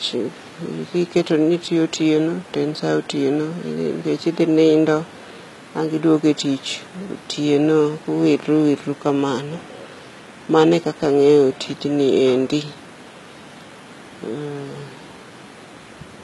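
Throughout, the s sounds turn gritty and lispy and the treble has a metallic sheen, which fits HE-AAC compression at around 20 kbps, likely rebuilding the upper band from copied lower harmonics.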